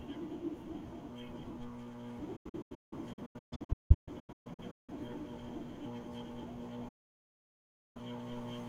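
From 2.36 to 4.92 s the speech is riddled with short silent holes (the longest about 0.17 s, roughly 1.5 s missing in all), then from 6.88 to 8.01 s about 1.07 s of it is lost: a digital broadcast dropout, where the receiver muted on lost frames. Each hole fades out in about 8 ms to silence, with no concealment or repeated sound.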